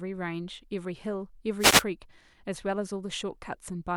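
A wireless microphone noise hit runs from 1.58 to 1.84 s. The analogue FM radio link briefly faded as reflected signals cancelled at the receiver, so receiver noise rose over the speech, heard as a quarter-second swish of static.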